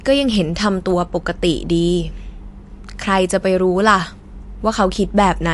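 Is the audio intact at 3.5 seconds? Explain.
No. At 3.5 s, as throughout, the speech sounds watery with nothing above 11.3 kHz. That's likely MP3 compression running short on bits, cutting the treble and dropping weak frequency lines.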